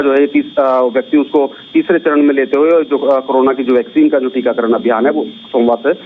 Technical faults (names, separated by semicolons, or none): gain pumping